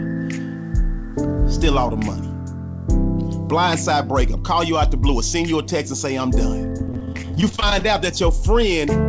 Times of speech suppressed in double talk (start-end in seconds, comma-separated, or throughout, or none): none